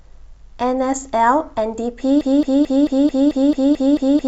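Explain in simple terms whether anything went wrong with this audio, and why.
At 2.21 s the speech turns into a broken-record loop. The same 0.22 s piece repeats nine times until the end. The player likely stalled, and the real audio is lost.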